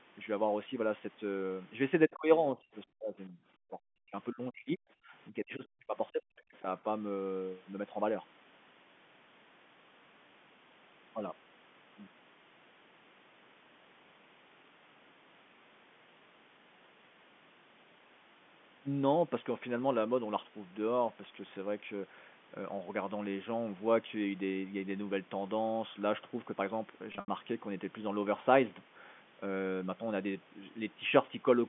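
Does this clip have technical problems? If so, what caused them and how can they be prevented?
Yes. Speech suppressed in double talk: while both sides spoke, the echo canceller could likely not separate the near talker from loudspeaker echo, so it turned the signal down. The sound dips by up to about 40 dB from 2.07 to 3.39 s, about 35 dB from 4.31 to 5.13 s, and about 40 dB from 5.29 to 6.67 s. Roughly a second of the first and third spans is affected. A headset, or an echo canceller with a stronger double-talk detector that keeps full-duplex operation, prevents this.

The other side's voice leaking through: during the first double-talk span, the canceller likely left part of the loudspeaker signal in the microphone path. A brief scrap of a second voice surfaces from 2.11 to 2.15 s, about 25 dB below the main speech. Using headphones, or giving the canceller a longer echo tail and better convergence, stops this leakage.

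Packet loss with pitch repetition: between 27.12 and 27.28 s, 120 ms of audio was lost, scattered over 160 ms, which fits six 20 ms packets. The receiver filled each gap by repeating the last pitch period. The shorter gaps sound like a slightly held, buzzy tone. The longest, about 80 ms, fades toward silence before a short cross-fade back into the speech. A steadier network link, an adequate jitter buffer and forward error correction reduce these dropouts.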